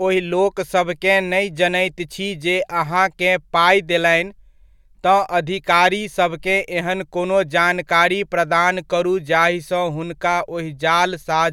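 Nothing in the speech recording stood out as a technical problem on listening.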